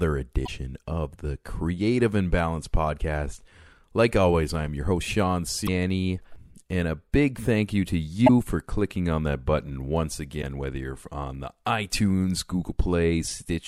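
Damaged data in a compressed stream produces brief glitches at 0.43–0.49 s, 5.63–5.68 s, 8.24–8.30 s and 10.39–10.44 s. Each lasts about 50 ms, as corrupted frames lose decoder sync. The result is heard as a chirp, squawk, click or short hole.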